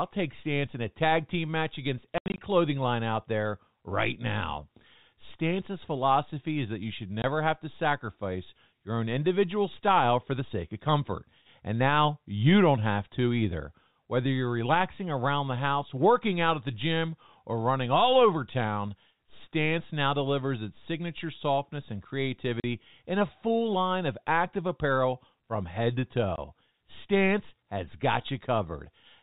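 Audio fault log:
2.18–2.38 s, 7.22–7.24 s, 22.60–22.64 s, 26.36–26.38 s: packet loss filled with silence. Dropped packets leave dead gaps with hard edges, in multiples of 20 ms. The worst is scattered holes totalling 140 ms after "tag team match against". Shorter ones follow "is that you should" and "apparel from head to".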